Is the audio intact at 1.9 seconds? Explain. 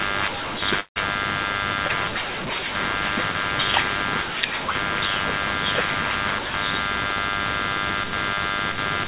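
No. Short concealed packet loss runs from 1.88 to 1.91 s. About 20 ms of the call never reached the decoder in time, and the receiver covered the gap by extending the preceding sound before blending back, heard as a brief smear or wobble.

Computer activity noise also sits underneath at this moment, as it does throughout the clip. Load changes in the computer disturb the audio circuit's shared ground, producing a faint buzzing pulse around 100 Hz, roughly 35 dB below the speech, that tracks the machine's activity.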